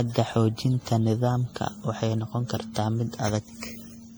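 Throughout, the speech sounds swirly, hollow and smeared, with blurred attacks. This is likely generation loss, fitting about seven repeated passes through 64 kbit/s MP3.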